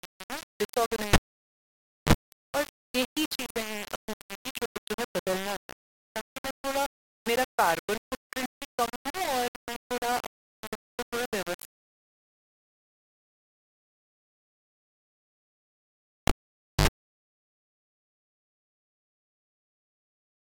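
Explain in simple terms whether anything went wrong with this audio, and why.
The speech sounds gritty and grainy the whole way through, with quiet bits sputtering. That's likely low bit depth without dither, roughly 5-bit, rounded.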